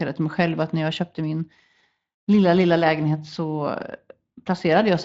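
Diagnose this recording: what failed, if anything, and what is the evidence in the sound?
Nothing failed; no fault is audible in this recording.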